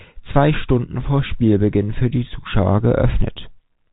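No faults are present in the speech; the band stops near 4 kHz with a faint level-following hiss beneath it, which fits ordinary G.711 A-law telephone coding at 64 kbps.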